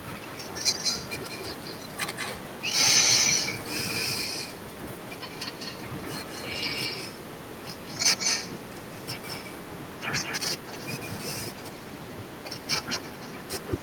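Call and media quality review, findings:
Echo leak. Delayed copy of the speech at 0.00–2.77 s (186 ms), 2.95–10.40 s (198 ms, about as loud as the speech) and 10.59–13.83 s (211 ms, much fainter). Likely far-end loudspeaker pickup that the echo canceller failed to remove.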